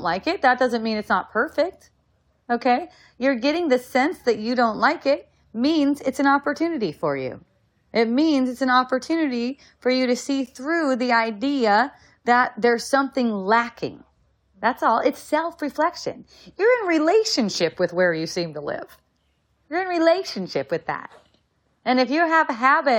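At 10.46 s there is a gap between stream segments: the timestamps of two adjacent segments fail to meet, and the player fills the mismatch of about 10 ms with silence. Nothing is lost from the speech. The sound stops abruptly and resumes slightly late, like a tiny tick or stutter. On a waveform the signal drops straight to a flat line with hard edges, and a spectrogram shows a narrow vertical blank stripe across all frequencies. The stream uses segments about 2 s long.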